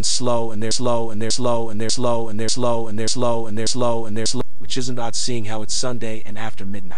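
Across the whole clip the waveform sits off the zero line because of a DC offset. It is not audible as a sound in itself, but it eats into headroom and shows up as a constant component at the very bottom of the spectrum.

From 0.71 s to 4.41 s the audio falls into a broken-record loop: a fragment of about 0.59 s repeats exactly, back to back, six times. This was likely caused by a stalled player or stream resending its last buffered fragment, so the audio due in that span is gone.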